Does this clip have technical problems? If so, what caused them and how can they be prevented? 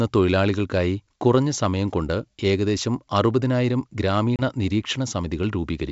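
Yes: packet loss on an ADPCM call at 4.36 to 4.42 s leaves a 30 ms silent gap, likely a few lost packets, and the decoder's predictor then restarts misaligned, slightly distorting the returning speech. Packet-loss concealment with decoder-state resynchronisation, or a jitter buffer on a cleaner network path, would prevent it.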